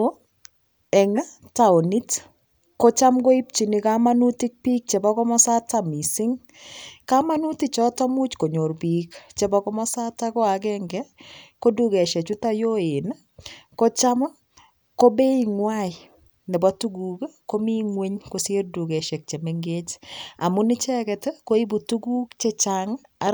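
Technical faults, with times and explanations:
No technical faults can be heard in this speech.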